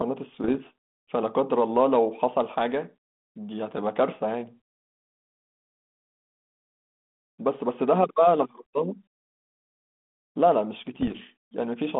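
Bit errors on an ADPCM link occur at 0.33 to 0.57 s and at 10.96 to 11.21 s. Flipped bits, under one percent, throw the decoder's step size and predictor off, so each error rings on as pops and rough bursts with brief level jumps.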